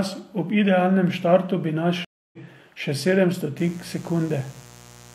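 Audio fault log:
2.05–2.39 s: stream reconnect. The connection dropped, leaving about 0.28 s of silence. A fresh decoder then resumed the speech roughly 0.2 s further on, skipping that stretch.
3.58–5.14 s: mains buzz. A steady, raspy 60 Hz buzz sits roughly 25 dB below the speech. Sharp switching spikes twice per mains cycle push harmonics up into the kilohertz range.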